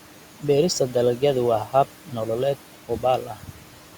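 A noise suppressor runs across the whole speech recording, pulling steady background down by about 12 dB frame by frame, so the residual noise dips between phrases and swells under them. Between 3.26 and 3.75 s, the suppressor mistakes parts of the speech for noise: speech cut by the noise suppressor pushes soft sounds down by up to about 12 dB, leaving roughly a fifth of a second sounding swallowed and faint. The room noise itself sits about 16 dB below the speech.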